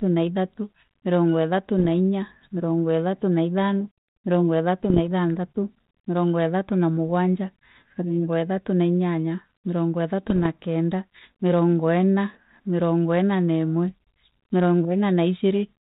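Short pops with rough, gritty bursts and brief jumps in level break through the speech at 1.78–1.91 s, just after "na ithatu mirongo ithatu", at 4.84–4.99 s, just before "ithanthatu mirongo ithatu na", and at 10.30–10.46 s, between "na inyanya mirongo ithatu" and "kenda mirongo ina". These are bit errors on an ADPCM link, at a rate of a few tenths of a percent. Each flipped bit throws off the decoder's step size and predictor, so the damage smears on for milliseconds. The band-limited sound suggests a 32 kbit/s G.726 path.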